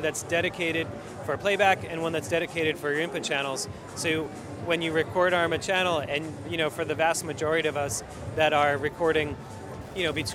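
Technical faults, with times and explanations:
8.28–10.34 s, Wi-Fi interference: faint ticking about 35 dB below the sound, repeating every 102.4 ms as the audio circuit rectifies a nearby radio's beacon.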